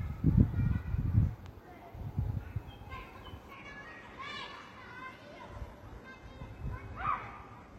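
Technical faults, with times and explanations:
3.53–7.79 s, adaptive stream at a lower bitrate: with no gap, the sound suddenly loses everything above 12.3 kHz and its treble turns synthetic, as a slowed connection forced a much leaner encode. A spectrogram shows a flat ceiling beginning abruptly at 3.53 s.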